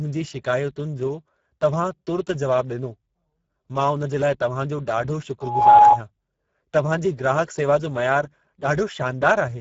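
Speech that sounds hoarse and grainy throughout, with nothing above 7.7 kHz, which is Speex codec damage at a low setting, a rate near 10 kbps. From 5.41 to 6.00 s an 839 Hz tone swells over about a third of a second to roughly 15 dB above the speech, a loudspeaker feedback squeal from the microphone picking up its own output.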